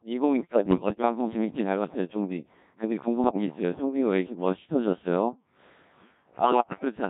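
From start to finish, the speech passes through the Codec 2 vocoder, and the damage is heavy. The waveform is not carried. Only pitch, voicing, level and a rough spectral shape are sent, and the decoder rebuilds the voice from sine waves. The result is robotic and buzzy, and its coarseness fits a very low rate near 1.3 kbit/s.

Bit errors on digital voice radio break in three times. The first runs from 0.40 to 1.02 s, the second from 3.24 to 3.46 s, and the third from 6.44 to 6.85 s. Flipped bits corrupt the parameters of whole frames, so pitch, loudness and tone jump at random. The sound turns into warbles and bleeping gibberish. The first two bursts suggest an error rate of about 7 percent. The last is harsher, at roughly 15 percent.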